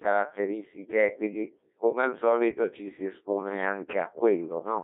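Speech passed through the Codec 2 vocoder throughout, heavily damaged: only pitch and envelope survive, resynthesised as buzzy, robotic sines in a 250 Hz to 3.6 kHz band fitting roughly 1.6 kbit/s. A spectrogram shows stiff, over-regular harmonic stripes with nothing outside that band.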